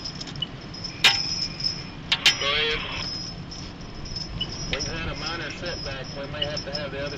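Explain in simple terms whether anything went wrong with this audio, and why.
Nothing went wrong here that a listener would notice; the audio comes through steady and intact with no glitches, gaps or odd sounds along the way.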